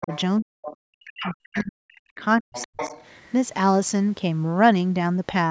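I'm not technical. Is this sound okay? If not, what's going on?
No, there are two related problems in the first few seconds.

The first is speech suppressed in double talk. Right at the start, up to about 0.11 s, the voice dips slightly. From 0.41 to 2.21 s it drops away much harder, fading, thinning or cutting out in pieces, and it does the same again from 2.41 to 2.81 s. This is likely the call's echo canceller getting confused while both people talked at once, so it turned everyone down.

The second is the other side's voice leaking through. A second voice sneaks in faintly from 0.01 to 0.21 s, then in short scraps at 0.64–0.76, 1.24–1.34 and 1.55–1.68 s, and more noticeably from 2.53 to 3.28 s. The person on the far end was coming out of a loudspeaker, and the echo canceller likely didn't scrub all of that out of the microphone, so bits of them got sent back. Those scraps get louder as the clip goes on.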